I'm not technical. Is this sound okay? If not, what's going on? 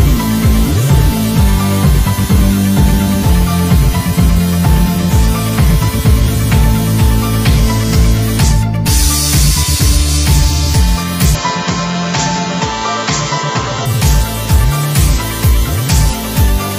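No. From 11.35 to 13.86 s the sound turns duller and slightly quieter, losing everything above 7.6 kHz, likely an input switched to a poorer device.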